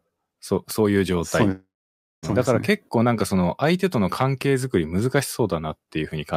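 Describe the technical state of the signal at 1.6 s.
A long network dropout runs from 1.51 to 2.26 s, and 1.6 s falls early inside it. The speech cuts off and the receiver keeps extending the last sound as a buzzy, fading tail, which soon gives way to about 0.57 s of near-silence. This is likely caused by packets failing to arrive for roughly 0.72 s. When the speech returns at 2.26 s, it picks up further on, and the stretch that never arrived is simply missing.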